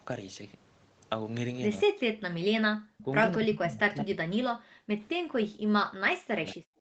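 From 1.84 to 2.27 s the speech drops away by about 40 dB, likely speech suppressed in double talk: the echo canceller, unable to separate this talker from the far side, turned everything down. On the waveform the envelope collapses to near-flat, and the spectrogram goes dark across all bands. At 2.99 to 3.03 s a brief, faint echo leak appears, likely a scrap of residual loudspeaker pickup returned 226 ms late at about 25 dB below the speech. It shows as a thin, smeared trace that repeats earlier energy. The same suppression returns at 3.02 to 3.12 s as a shallower dip of about 15 dB, then deeply from 3.34 to 4.9 s and from 5.95 s to the end, each time at about 40 dB, leaving gaps or broken fragments in the waveform.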